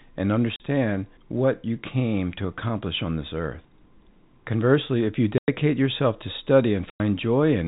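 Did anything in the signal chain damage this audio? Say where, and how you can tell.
Yes, at the network stage: packet loss filled with silence. The speech drops to dead silence at 0.56 s for 40 ms, at 5.38 s for 100 ms (between "if you" and "yourself to"), and at 6.9 s for another 100 ms. Both gap lengths are multiples of 20 ms, which fits 20 ms packets going missing and the receiver inserting zeros instead of concealing them. The cuts have hard edges, within the band-limited G.711 telephone coding.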